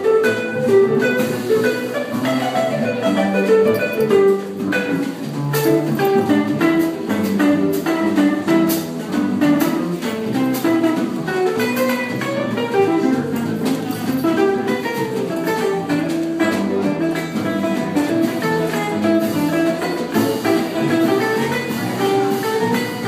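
No technical faults can be heard anywhere in the audio, and the signal stays steady and intact throughout.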